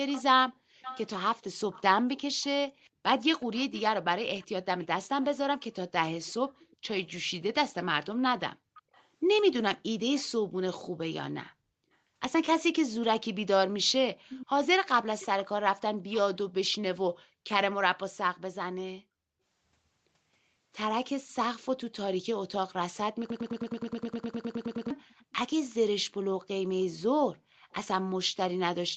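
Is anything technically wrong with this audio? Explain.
Yes, there are three kinds of fault.

Echo leak, 0.12 to 10.23 s, 11.92 to 11.97 s and 25.02 to 25.75 s: a loudspeaker echo that the far-end canceller likely missed returns 369 ms late. It is roughly 15 dB below the speech at first, then much fainter.

Background gated by the echo canceller, at 2.91 to 3.03 s, 8.56 to 8.70 s, 11.50 to 11.72 s and 17.35 to 17.39 s: the canceller clamped the microphone. The room sound briefly drops by about 40 dB, or about 21 dB at 11.5 s.

Broken-record loop, 23.30 to 24.90 s: a 104 ms fragment repeats 15 times back to back, likely from a stalled stream resending its last buffer. The audio that should have played there is lost.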